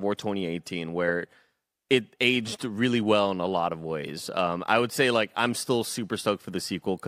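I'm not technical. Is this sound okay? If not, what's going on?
Yes, it sounds fine.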